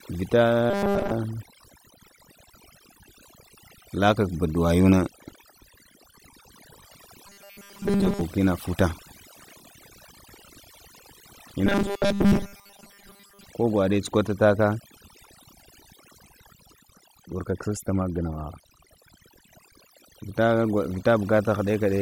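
The whole speech clip carries overdone noise removal: the reduction was pushed so hard that individual frequency bands sitting near its noise estimate get pulled down or cut out entirely, taking softer parts of the voice with them. You hear it as a background that drops away and breaks up into little twinkling specks.

On top of that, three stretches go robotic, from about 0.70 to 1.12 s, 7.27 to 8.21 s (ending just before "ina futa"), and 11.66 to 13.45 s. The voice turns into a stiff metallic buzz at 200 Hz that still roughly tracks the speech. That pitch points to a 5 ms chunk being looped, likely robotic sound from repeated short buffers when fresh audio arrived too slowly, with most of the real sound skipped over.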